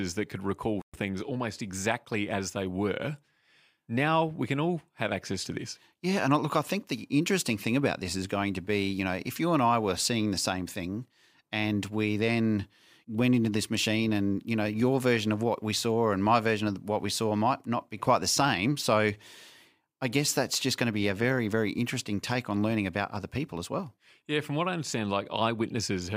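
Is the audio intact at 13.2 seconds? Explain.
Yes, at 13.2 seconds the speech is intact, with no dropout, click, distortion or other fault at that moment.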